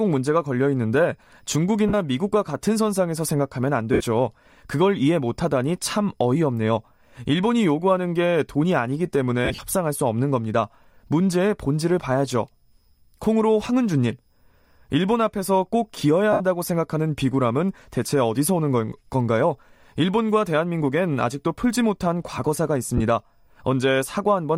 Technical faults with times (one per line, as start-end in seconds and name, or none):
1.88-1.94 lost LE Audio frames
3.93-4.01 lost LE Audio frames
9.45-9.59 lost LE Audio frames
16.33-16.41 lost LE Audio frames
22.97-23.01 lost LE Audio frames